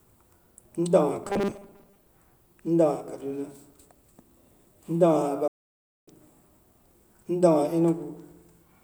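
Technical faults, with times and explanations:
1.24–2.08 s, robotic sound from repeated short buffers: For just under a second the speech turns into a rigid metallic buzz fixed at 200 Hz while still loosely tracking the syllables. The likely cause is the software repeating a 5 ms stretch of audio whenever new data arrived late, so about half of this section is copied material and the skipped real audio is lost. A spectrogram would show evenly spaced horizontal harmonic lines at multiples of 200 Hz replacing the normal voice harmonics. The waveform would show a short, identical cycle repeating over and over.
5.48–6.08 s, playback stall: The speech cuts off mid-flow and the output goes completely silent for about 0.6 s before the sound resumes. The likely cause is that the player ran out of buffered data, or its playback thread was blocked, and it emitted nothing until it recovered. On the waveform this appears as an abrupt flat, silent stretch with sharp edges on both sides. 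A spectrogram would show a clean vertical blank band across all frequencies for that span.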